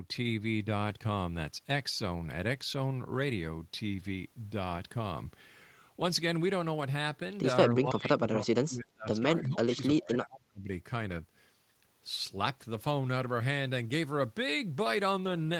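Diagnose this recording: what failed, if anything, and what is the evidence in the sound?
Call processing: speech drops, about 30 dB, at 7.75–9.19 s and 9.4–10.68 s, likely speech suppressed in double talk, with the echo canceller ducking both the talker and the loudspeaker echo.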